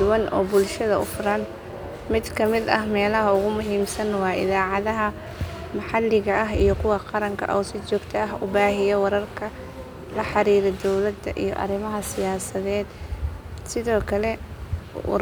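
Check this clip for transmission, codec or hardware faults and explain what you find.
Nothing turned up here, and the speech comes through without any transmission, codec or hardware trouble worth flagging.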